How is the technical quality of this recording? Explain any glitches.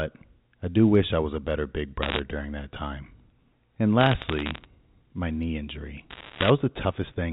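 The recording has a telephone-band sound with nothing above 4 kHz, as G.711 A-law at 64 kbps gives, and it carries three short bursts of crackle.

Bit errors on a digital phone line: sharp ticks and crackle sit over the speech at 2.02–2.19 s, between "was a better big" and "during that time". They return at 4.00–4.66 s, just before "my knee injury", and again at 6.1–6.5 s, after "my knee injury". Each flipped bit corrupts one 8-bit sample. A hit on a high bit, or on the sign of a loud sample, throws the waveform far off for an instant, and that makes a click. The last burst, at roughly two bits in a hundred, is the densest. The middle one, at about one in two hundred, is the sparsest.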